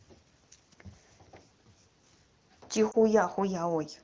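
Speech coded with AMR wideband has a brief dip or warble at 2.91–2.96 s from lost AMR speech frames, which fits one dropped 20 ms frame. The decoder briefly repeats the previous pitch and vocal tract settings at reduced gain before recovering.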